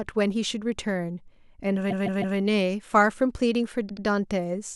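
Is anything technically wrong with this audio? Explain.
Yes, repeated frames. From 1.90 to 2.37 s a 156.7 ms block is played three extra times, and from 3.88 to 4.04 s a 78.4 ms block plays twice more. A run of compressed frames, fitting about six and then three frames, was sent again, so the decoder replays identical audio as a stutter. Unlike a dropout, nothing is lost: the clip grows by about 0.63 s.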